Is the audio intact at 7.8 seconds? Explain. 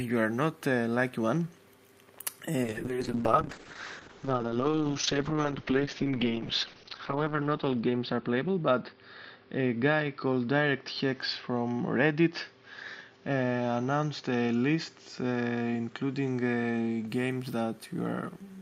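No. A call bitrate drop runs from 2.65 to 17.13 s. The encoder's rate falls from 64 to 7 kbps, its lowest for 4.7 s. Coding turns coarse and the bandwidth shrinks from 20 kHz to 6 kHz. The sound is rough and muffled.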